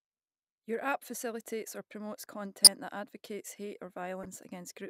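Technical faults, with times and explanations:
2.64–2.67 s and 4.23–4.26 s, corrupt frame decoded: damaged compressed frames were played anyway, spraying energy into the wrong frequencies for a few frames' length, a loud error first, then a much fainter one. Unlike a click, each error carries misplaced energy rather than a single spike.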